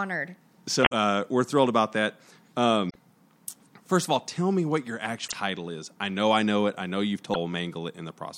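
Damaged data in a compressed stream at 0.82–0.92, 2.86–2.96, 5.24–5.34 and 7.30–7.36 s: corrupted bytes make the decoder misread frames and lose sync while it hunts for the next valid header. Each event is a brief chirp, squawk, click or short hole cutting through the speech.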